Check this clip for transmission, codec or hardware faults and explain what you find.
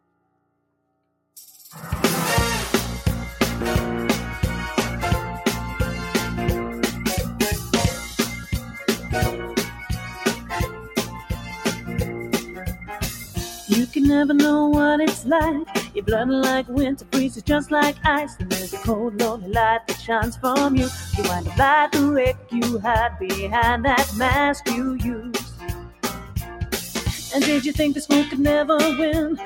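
A speech noise suppressor is processing non-speech material, and it cuts parts of the sound.

Noise suppressor applied to music or sounds, throughout: the processor treats steady tones, ambience and decays as noise. Its gain swings by roughly 10 dB. Onsets pass, but sustained parts and tails sink, so the level pumps and thins.

Sound cut by the noise suppressor, at 0.01–1.02 s (about 16 dB), 8.41–9.05 s (about 6 dB), 9.66–13.96 s (about 11 dB), 15.14–16.04 s (about 14 dB), 16.63–21.52 s (about 16 dB), 22.33–22.54 s (about 12 dB) and 24.55–27.33 s (about 15 dB). In these spans the suppressor judges the sound to be noise and pulls it down hardest. Held and fading material drops away or ends early. The longest stretches lose a few seconds of sound in total.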